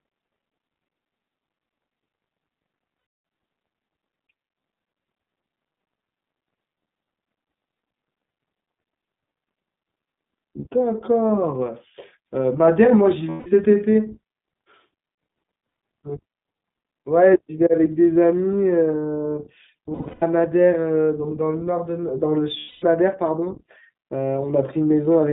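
Throughout, the speech carries iLBC codec damage: it is confined to roughly 150 Hz to 3.6 kHz and has a plainly rough, synthetic texture. That fits the 15.2 kbps mode with 20 ms frames, each coded independently of its neighbour.

Lost iLBC frames occur at 2.98–3.24 s (260 ms), 13.30–13.48 s (160 ms), 19.94–20.24 s (scattered dropouts, the longest roughly 150 ms) and 22.58–22.84 s (240 ms). The decoder repeats the last pitch cycle mixed with noise, giving a held, buzzy vowel, then recovers cleanly at once.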